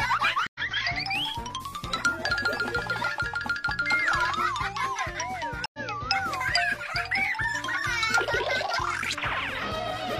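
A stream reconnect happens twice, at 0.47 to 0.60 s and again at 5.66 to 5.79 s. Each time the connection drops, the player falls silent, reconnects and starts a fresh decoder partway through the stream. The result is an 80 ms gap of dead air, after which the sound resumes slightly ahead of where it stopped. The jump is about a tenth of a second at the first break and roughly half that at the second.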